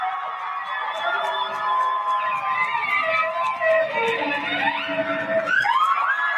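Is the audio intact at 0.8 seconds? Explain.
No. A noise suppressor built for speech is running on this non-speech sound, treating steady tones, ambience and decay as noise and pulling them down. Its gain swings by around 5 dB, so sustained parts pump and thin while sharp onsets pass largely untouched.

At 0.8 seconds the audio is affected: the sound is cut by the noise suppressor from 0.11 to 0.89 s, sinking by up to about 7 dB. Held and fading material drops and its tail is clipped short, leaving a hollow, ducked stretch.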